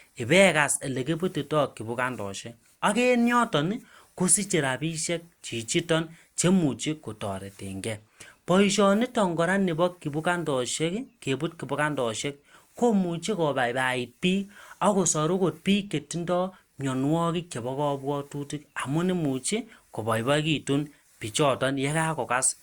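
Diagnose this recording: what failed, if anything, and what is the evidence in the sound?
Nothing failed; no faults heard.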